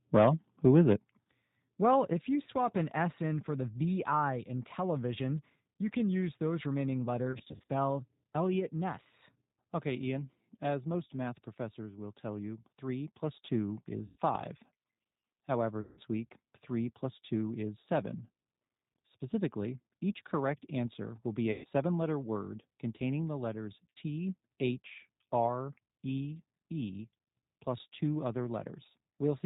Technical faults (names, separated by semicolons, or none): G.729 codec; microphone overload; microphone volume stepped down; VoIP packet loss concealed by the speech codec